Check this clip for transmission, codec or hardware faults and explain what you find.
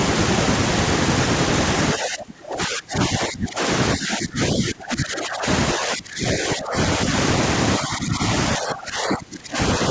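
Speech suppressed in double talk occurs six times, at 1.94–3.61 s, 3.94–5.46 s, 5.73–6.77 s, 7.79–8.23 s, 8.56–9.58 s and 9.78–9.82 s. The likely cause is an echo canceller that cannot tell the talker from loudspeaker echo while both ends speak, so it turns both down. The speech dips by up to about 25 dB in the first and fifth spans, about 20 dB in the second and third, about 10 dB in the fourth, and only slightly in the last.

The call path carries nothing above 8 kHz, which fits a wideband call codec such as G.722.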